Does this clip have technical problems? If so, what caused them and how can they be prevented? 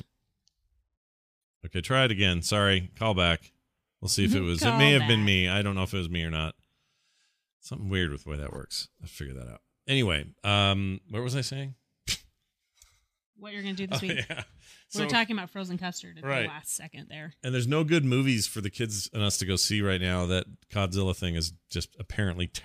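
Yes. At 4.55 s, a corrupt frame decoded: flipped bits misplaced energy across one frame, giving a brief chirp, blip or burst of noise rather than a dropout's silence. Checksums that conceal damaged frames prevent it.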